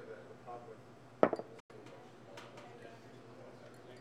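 From 1.60 to 1.71 s the audio cuts to silence and resumes as if it had played on, not where it stopped: likely a Bluetooth dropout.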